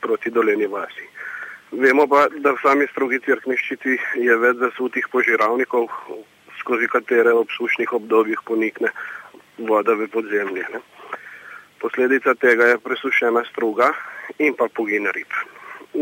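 No technical faults can be heard anywhere here.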